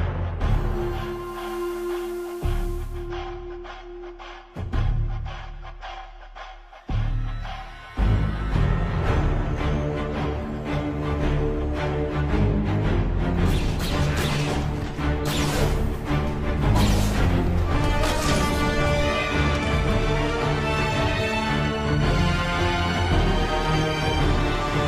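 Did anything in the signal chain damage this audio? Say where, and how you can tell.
Yes. From 1.03 to 3.13 s there's a digital radio blend to analogue: the receiver lost the digital stream and cross-faded over about 0.45 s to the station's FM feed and back. You hear hiss sitting roughly 30 dB under the programme, with no level jump.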